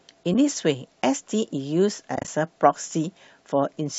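At 0.34 s, and again scattered from 2.16 to 2.28 s, the speech drops into brief silences: AAC frame loss with muting. The decoder zeroes each missing frame's spectrum, so overlapping windows fade the sound out and back in. The holes have soft edges, unlike a hard dropout. The 10 ms gaps fit short frames from what is likely light low-delay AAC compression. The later cluster's longest gap is about 30 ms.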